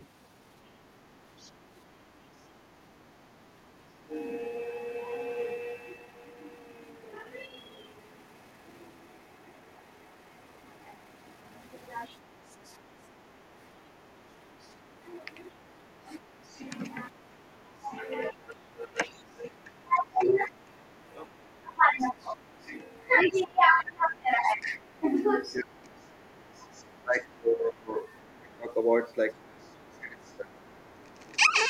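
From 0 to 2.56 s a faint second voice, far below the speech, sits underneath: the other side's voice leaking through, likely from loudspeaker echo the echo canceller left behind. At 3.64 to 4.13 s the speech dips sharply for about half a second. That is speech suppressed in double talk, likely the canceller turning everything down when both sides spoke at once. A brief, smaller dip follows at 12.07 to 12.14 s, the same suppression, likely for the same reason. From 12.07 to 16.63 s the faint leaked voice returns beneath the speech, likely residual echo again. From 15.51 s to the end the speech repeatedly drops deeply, in pieces, for about ten seconds in total. This is suppression in double talk, likely the canceller mistaking the talker for echo. From 20.28 to 31.47 s the other side's voice leaks through a little louder than before, likely because the echo canceller is removing less of it.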